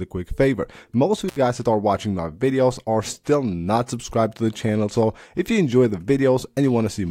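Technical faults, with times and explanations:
1.28 to 1.37 s, intermittent contact: the sound drops out for about 71 ms, with a short crackle as it breaks and again as it returns, and a faint hiss fills the gap. A loose plug or cable connection has opened for a moment, so the signal path is broken rather than turned down. The contact scrapes as it separates and remakes, which causes the crackle, while the hiss is the noise that remains downstream of the break.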